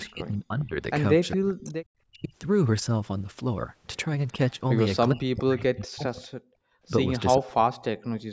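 Speech suppressed in double talk from 0.07 to 2.33 s: the speech dips by roughly 35 dB in pieces, about a second in total. This is likely an echo canceller that could not separate the talker from loudspeaker echo while both sides spoke, so it turned both down.

Echo leak from 0.59 to 1.37 s: a copy of the speech returns 407 ms late, roughly 15 dB below it. The far end's canceller likely did not remove all of its loudspeaker sound.

Speech suppressed in double talk again from 4.32 to 6.2 s: the speech drops by roughly 40 dB, around a second altogether.

Echo leak from 4.5 to 4.57 s: a faint scrap comes back at the same 407 ms delay, roughly 40 dB down.

Echo leak from 6.22 to 6.27 s: another scrap, roughly 30 dB down.

Background gated by the echo canceller from 6.48 to 6.83 s: the room sound drops by about 31 dB for around 0.4 s while the canceller clamps the microphone, then recovers.

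Speech suppressed in double talk from 7.38 s to the end: the speech cuts by roughly 40 dB for about 0.7 s in total.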